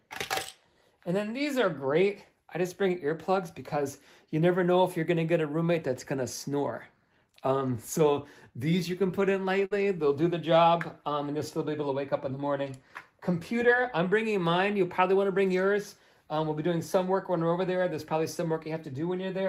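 At 9.65 s a burst of packet loss interrupts the audio until 9.73 s. Several consecutive packets failed to arrive in time, so the receiver bridged about 53 ms by extending the last decoded sound while lowering its level, heard as a brief held tone or thinning hiss. Playback then picks up further along, skipping roughly 60 ms of material, which leaves an abrupt jump where the continuity breaks.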